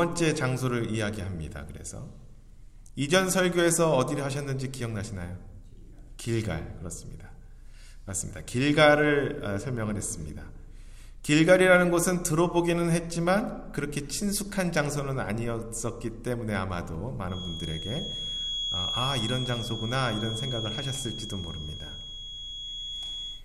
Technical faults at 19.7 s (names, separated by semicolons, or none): feedback whistle